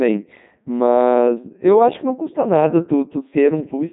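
From start to finish, the speech has passed through the Codec 2 vocoder. The damage is heavy. The waveform itself is not carried. Only pitch, voicing, energy and a rough spectral outline survive, and the decoder rebuilds the voice from sine waves. The result sounds robotic and buzzy, with a synthetic edge on every syllable. Nothing remains above 3.8 kHz, so the top end is dull. The quality fits Codec 2 at about 3.2 kbit/s.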